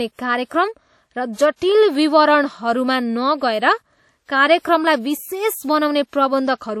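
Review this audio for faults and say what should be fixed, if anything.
Lossy transform coding runs through the whole clip, and WMA compression is the likely cause. The speech carries a ringing, washy quality with a hiss that rises and falls with the signal. Nothing is present above 17.2 kHz. Audible damage at this level points to a low bitrate, roughly 48 kbps, at which weak spectral lines are dropped and quantisation noise smears across long blocks. To prevent it, encode at a higher bitrate or with a modern codec, or keep a lossless master.

Pre-echo appears twice, from 1.56 to 1.62 s, spreading about 55 ms, and from 4.25 to 4.29 s, spreading about 31 ms. In each case a short hiss arrives just ahead of a sharp onset, and the attack itself sounds softened. The codec spreads noise evenly over each block, so noise sized for the loud onset also fills the quiet lead-in. To prevent it, use an encoder that switches to short blocks on transients, or raise the bitrate.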